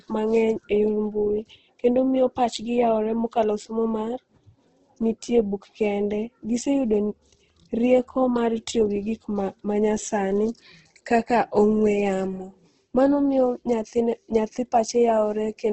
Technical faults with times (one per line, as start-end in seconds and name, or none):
0.00-15.73 Opus compression